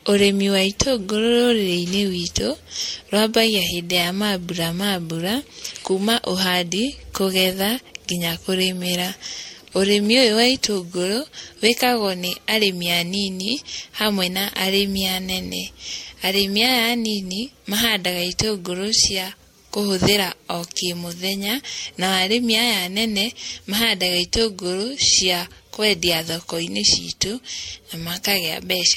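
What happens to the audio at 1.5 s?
At 1.5 s the speech carries generation loss, present across the whole clip: it sounds swirly, hollow and smeared, with blurred attacks and nothing above 16.5 kHz. This likely comes from around four successive MP3 encodes at about 64 kbit/s, each requantising on a shifted frame grid.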